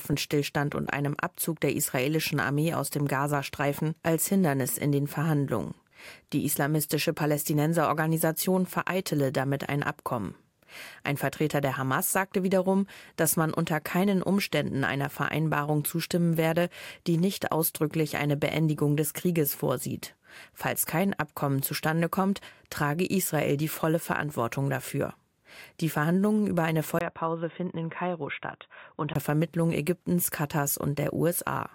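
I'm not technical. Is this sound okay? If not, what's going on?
No. From about 27.0 to 29.2 seconds the sound turns dull, boxy and a bit quieter, with a tiny gap at the switch, likely an input switched to a poorer device.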